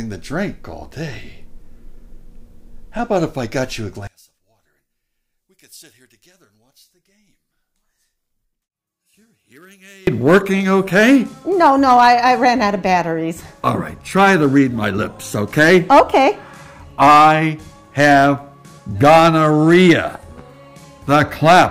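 One channel inverted, 4.07 to 10.07 s: the sound falls about 30 dB to a faint residue, likely as reversed polarity cancels shared content in mono.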